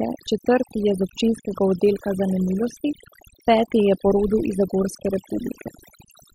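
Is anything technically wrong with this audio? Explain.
Yes. Overdone noise removal affects the whole speech clip. A noise reduction stage set too strong cuts frequency bands that sit near its noise estimate, and quiet parts of the voice go with them. Gaps fall to near silence with twinkling specks.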